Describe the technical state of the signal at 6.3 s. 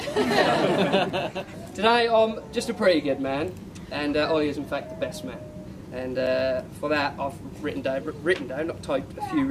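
At 6.26 s there is a block of digital silence lasting 5.3 ms. It fits a 256-sample buffer left unfilled. The abrupt edges produce a tick.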